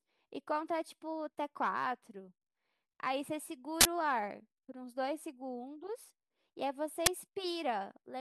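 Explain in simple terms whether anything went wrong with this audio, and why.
Two harsh bursts of digital noise cut into the speech. Both are an uninitialised buffer: the audio system played a chunk of memory before any sound was written there. The first runs from 3.81 to 3.85 seconds. The second, shorter one hits at 7.06 seconds.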